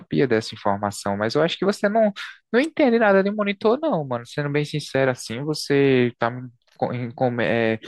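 No technical faults are audible.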